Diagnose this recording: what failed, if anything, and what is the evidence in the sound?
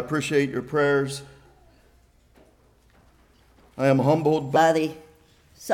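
A section at the wrong speed runs from 4.56 s to the end. The sound abruptly turns higher and hurried, about four semitones up, at 1.27 times normal speed. Pitch and tempo shift together. The stage is likely playback or editing against a mismatched clock.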